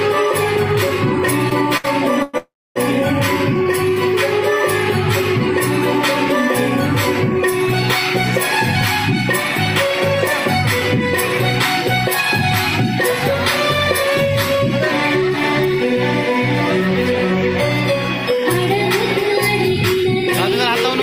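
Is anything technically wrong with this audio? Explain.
Yes, the audio has several delivery and capture faults.

From 1.49 to 2.35 s, repeated stalls (stutter) make the sound drag through four short held-over gaps, the longest 110 ms. Packets arrived late, so the jitter buffer kept running dry and the receiver stretched the last sound.

From 2.37 to 2.78 s, the audio hangs as a fading continuation, then goes silent for about 270 ms before resuming with nothing lost. This is a call audio freeze, likely from packets held up in transit.

At 10.27, 13.58 and 15.74 s, an abrupt jump marks a dropped buffer (overrun). About 20 ms vanishes each time, likely because samples weren't collected before being overwritten.

From 14.59 to 15.92 s and from 17.93 to 19.21 s, the sound runs about 3% fast at unchanged pitch. This jitter buffer speed-up trims short pitch-period slices, around 50 ms in each stretch, to shed excess delay.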